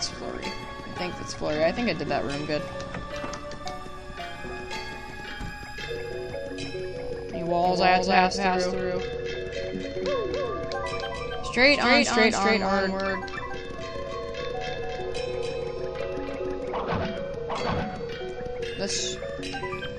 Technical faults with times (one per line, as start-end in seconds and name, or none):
7.65-16.73 doubled audio track